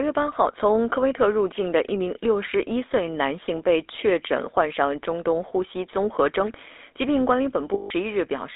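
Throughout the speech, the GSM full-rate codec is plainly audible. The vocal tract is modelled and excited by sparse regular pulses, leaving a buzzy, gravelly roughness. The band sits between about 300 Hz and 3.7 kHz, and the coarseness points to the 13 kbps full-rate coder.

From 7.74 to 7.91 s, lost GSM frames leave a 160 ms gap, which fits eight 20 ms frames. The decoder repeats the last good frame's parameters, so the sound freezes into a rough, metallic ring.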